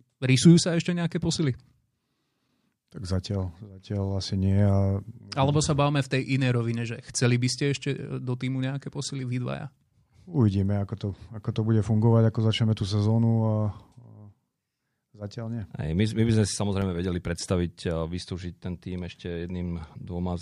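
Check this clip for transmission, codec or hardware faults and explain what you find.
One fault is audible in this speech recording. A block of digital silence occurs at 16.81 s. The output was likely not filled in time, so about 2.9 ms of samples dropped straight to zero, which fits a 128-sample buffer going unfilled. Because the signal jumps to zero and back with no fade, each edge makes an abrupt discontinuity. At this length the two edges merge, and the gap is heard as a tick or dip rather than a hole in the speech.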